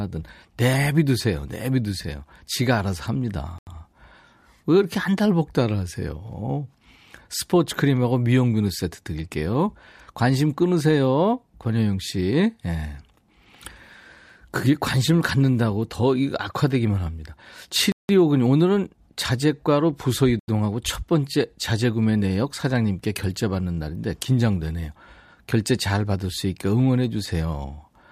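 Speech that drops abruptly into dead silence three times: 3.58 to 3.67 s (about 85 ms), 17.92 to 18.09 s (about 170 ms, heard as a short hole), and 20.40 to 20.48 s (about 85 ms). Each is a block of digital silence, where samples were zeroed with no fade, most likely because the output buffer was not filled in time. The gap lengths fit 4096- and 8192-sample blocks.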